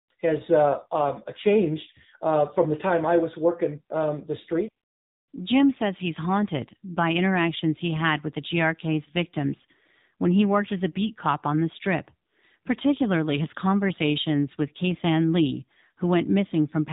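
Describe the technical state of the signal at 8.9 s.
At 8.9 s the speech carries AMR narrowband mobile codec damage, present from start to finish rather than at that moment alone. The signal has been reduced to an 8 kHz sampled band with nothing above 4 kHz, and the voice is rebuilt from a vocal-tract model excited by a few pulses per 5 ms subframe. The buzzy, synthetic quality is plainly audible, which fits one of the lower AMR-NB modes, around 7.4 kbps.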